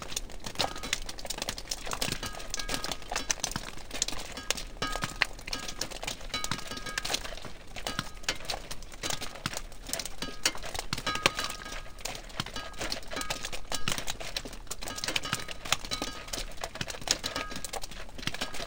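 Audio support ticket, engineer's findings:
Stereo read as mono, throughout: half speed, octave low. Decoder reads interleaved L/R as one channel; a faint mirrored image in the upper band rules out a sample-rate mismatch.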